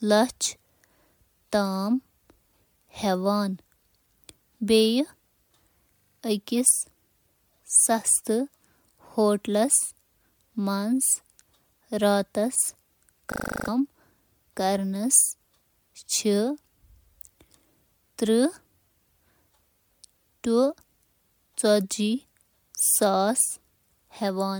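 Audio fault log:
throughout: generation loss. The speech sounds swirly, smeared and hollow, with blurred consonant onsets and nothing above 20.1 kHz. This is likely from repeated MP3 re-encoding, about seven passes at 128 kbit/s, which degrades it beyond what a single encode at that rate would.
5.96–6.2 s and 13.32–13.68 s: system hang loop. A 40 ms fragment repeats exactly at 25 Hz, 6 times then 9 times, giving a rough buzzing stutter while about 200 ms and 400 ms of speech go missing. It is identical repetition, not a silent dropout.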